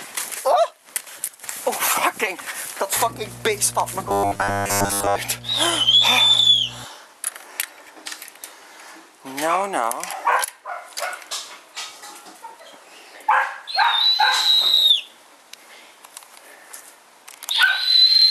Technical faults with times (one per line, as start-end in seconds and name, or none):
2.97-6.84 mains hum
4.09-5.16 robotic sound from repeated short buffers